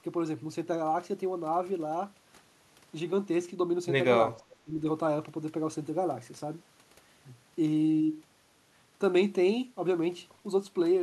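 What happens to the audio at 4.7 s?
At 4.7 s the speech is caught in a brief dip. From 4.47 to 4.8 s the level falls by roughly 15 dB at its deepest and then recovers, about a third of a second in all. This is speech suppressed in double talk. The likely cause is both ends talking at once. The echo canceller cannot tell the near talker from the returning loudspeaker echo, so it turns everything down together.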